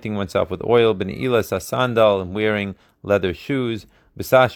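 Nothing goes wrong anywhere in this bit of speech; there's simply no technical fault to point to.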